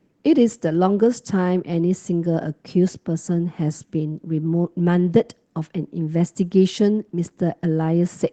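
No technical faults are present in this speech recording, which carries the normal character of a WebRTC call path, with a top end that stops at about 8 kHz, as fits an Opus call codec running in wideband mode.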